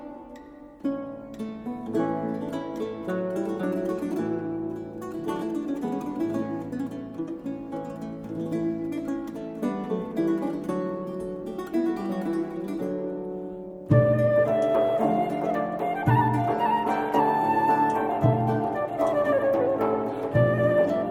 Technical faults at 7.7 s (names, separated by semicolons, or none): none